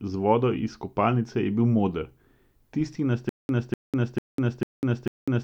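A speech clip with a stutter with silent gaps. Just after "tisti na", at 3.29 s, playback starts repeating one fragment of 0.25 s. Each repeat is followed by 0.2 s of digital silence. The cycle recurs every 0.45 s, five times, and continues to the end. This is likely a stalled player or stream replaying its last buffered piece on each retry and then running dry. The speech due in that stretch is lost.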